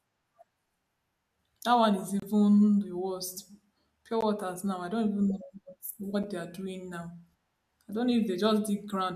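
Around 2.20 to 2.22 s the speech drops out into a short, hard-edged hole, and the same thing happens again at 4.21 s and 6.23 s, so roughly every two seconds. That's a gap between stream segments: the timestamps of neighbouring 2-second chunks don't quite meet, and the player pads the mismatch with silence. The holes shrink each time, about 27 ms, then 16 ms, then 7 ms. Nothing is lost, but each one is a clean little stutter.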